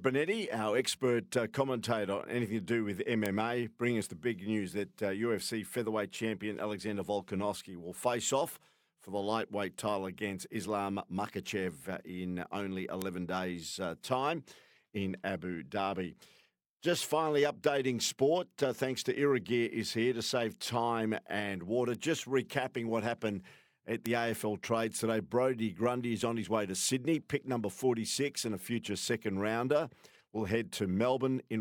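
At 3.26, 13.02, 21.95 and 24.06 s, the speech carries a bit error spike. Each is a single sample. One flipped bit throws that sample's value by a power of two, and the next sample is correct again. The result is one sharp, broadband tick with no link to the speech around it. Three peak at about -11 dBFS. The one at 21.95 s is quieter, at about -23 dBFS.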